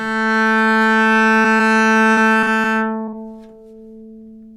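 At 1.41 to 1.46 s and again at 1.56 to 1.61 s there is short concealed packet loss. A few tens of milliseconds of audio arrived too late to play, and the receiver bridged each hole by extending the sound just before it, about 27 to 32 ms of synthetic fill, before fading back into real audio. Each is heard as a brief smear or wobble.

From 2.11 to 2.66 s the damage becomes repeated packet loss, with a robotic sound. Four separate holes fall within about half a second, the longest about 54 ms, and concealment fills roughly a fifth of that stretch. Because each patch is followed quickly by another, the sound turns choppy rather than merely smeared. That clustering, not the length of any one gap, separates it from the isolated losses.

At 3.04 to 3.09 s and 3.09 to 3.14 s, two more short concealed losses sit back to back, each replacing about 40 ms with roughly 32 to 36 ms of continued sound. 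Heard together, they give one slightly longer wobble, not the sustained choppiness of the earlier stretch.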